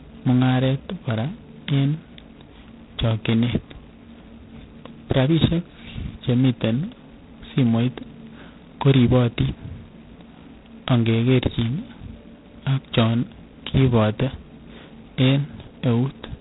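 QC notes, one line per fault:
Throughout, G.726 ADPCM: the codec sends only a few bits per sample of the difference from an adaptive prediction, and the heavy damage fits its lowest 16 kbit/s mode, where the coarse steps leave large quantisation error. That error becomes a harsh, rasping hiss riding on the speech and rising and falling with its level. The telephone band also cuts everything above 3.8 kHz, so sibilants lose their edge and the sound is muffled and narrow.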